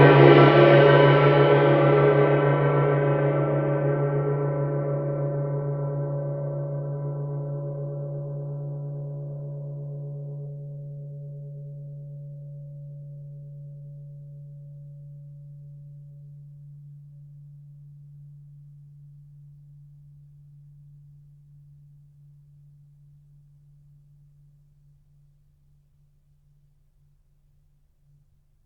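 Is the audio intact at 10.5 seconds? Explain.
No. At 10.45 s the music abruptly jumps forward with no gap, about a second of it missing and the two sides butted together. This is a skip ahead: a stretch was dropped in transit or by an overflowing jitter buffer while later audio was queued.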